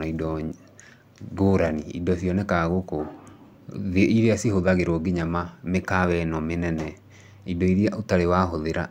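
No faults are audible anywhere in the speech; level, timing and continuity hold steady throughout.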